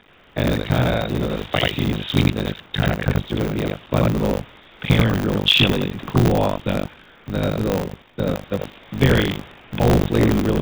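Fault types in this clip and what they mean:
Buffer tearing: the playback writer and the hardware reader have slipped into each other, so about 40% of every period replays audio from roughly 70 ms earlier. That gives a constant 50 Hz robotic rattle riding on the speech, which fits a 20 ms buffer period.
Comfort noise in place of the background: in the gaps at 0.0–0.36, 2.66–2.74, 4.52–4.82, 6.94–7.26, 8.02–8.18, 8.7–8.92 and 9.52–9.72 s, the real room sound turns into flat, featureless hiss about 3 to 8 dB quieter, likely from the sender's discontinuous transmission.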